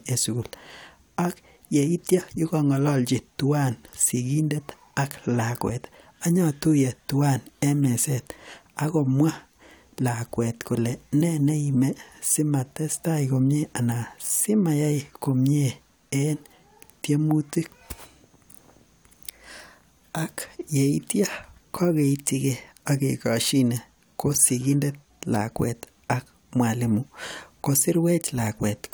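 No technical faults can be heard anywhere in the speech recording, and the signal stays intact from its opening moment to its final one.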